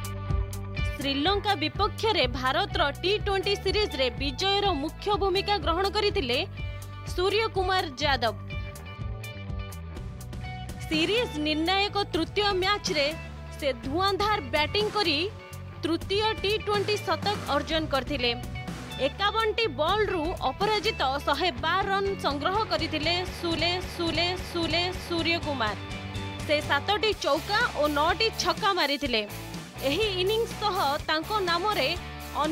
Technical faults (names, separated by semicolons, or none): repeated frames